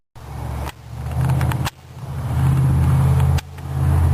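No audible technical faults are present anywhere in the recording.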